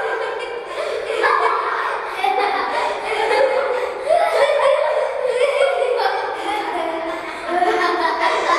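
Nothing to flag here: the sounds in this recording come through without a single technical fault worth pointing out.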